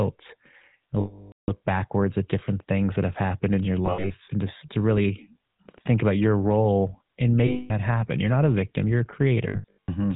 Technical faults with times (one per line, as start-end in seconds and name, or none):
0.00-10.15 GSM full-rate codec
1.00-1.51 lost GSM frames
3.59 electrical switching spike
3.86-4.11 lost GSM frames
7.46-7.72 lost GSM frames
9.48-9.92 lost GSM frames